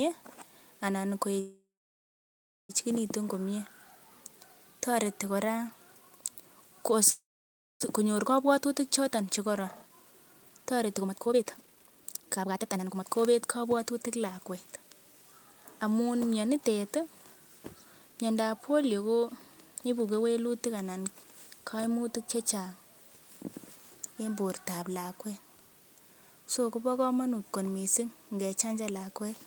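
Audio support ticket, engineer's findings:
Call audio freeze at 1.39–2.71 s and 7.10–7.82 s: last sound smeared into a fading buzz, then silence for about 1.05 s and 0.59 s. Likely jitter buffer underrun from held-up packets. Audio resumes where it stopped, adding about 1.3 s and 0.71 s of delay, nothing lost.

Jitter buffer speed-up, 9.22–14.45 s: speech runs at 138% of normal rate, same pitch, sounds hurried. Receiver trimming short pitch-period chunks repeatedly to drain the excess buffered delay; roughly 2 s cut in total.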